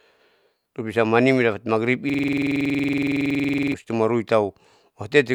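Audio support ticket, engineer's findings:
System hang loop, 2.10–3.74 s. Driver/host froze; audio hardware kept replaying one ring buffer. A 46.4 ms slice repeats 35 times at 21.5 Hz, fitting a 2048-sample buffer. Heard as a rapid machine-gun stutter replacing the speech.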